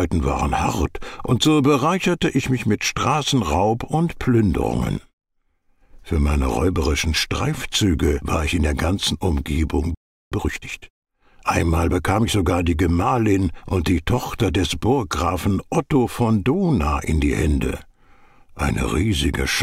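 At 9.95 s the audio drops into silence for about 0.37 s, resuming at 10.32 s: a playback stall, likely the player starving for data or its thread being blocked.

From 10.32 to 11.04 s comes time-compressed catch-up: the player trims its backlog by splicing out short pieces and cross-fading the joins, running at about 1.5 times normal speed. Pitch stays unchanged, which separates it from a sped-up resampling.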